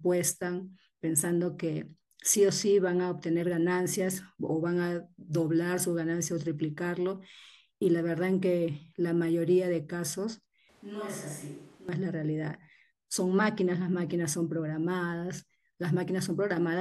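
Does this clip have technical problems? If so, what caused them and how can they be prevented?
Yes. From 10.69 to 11.89 s the close microphone's feed likely dropped out, forcing a switch to a distant microphone: the speech turns abruptly roomy, hollow and thin, about 10 dB quieter, with room noise rising, then snaps back. Securing and monitoring the close mic's connection prevents this.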